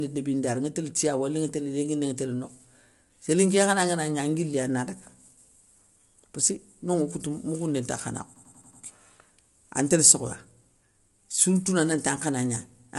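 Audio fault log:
Throughout: low-delay AAC compression, plainly audible. The speech sounds rough and grainy, with noise filling the gaps between harmonics and nothing above 11.6 kHz. The cause is likely AAC-ELD at a low bitrate, whose short frames resolve pitch harmonics poorly.
8.36–8.82 s: system hang loop. A 92.88 ms slice repeats exactly five times, giving a machine-gun stutter at about 10.8 Hz. The system froze while the hardware kept cycling its ring buffer, which fits a 4096-sample buffer. Essentially no audio is lost.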